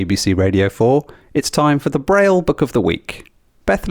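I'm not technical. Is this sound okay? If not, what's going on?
Yes, this one's fine: nothing in the speech stands out as a problem, so there's nothing to worry about here.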